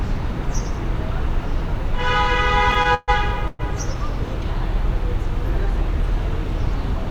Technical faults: repeated stalls (stutter); call audio freeze

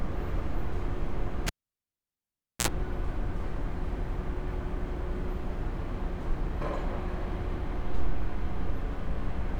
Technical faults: cable pulled and plugged in

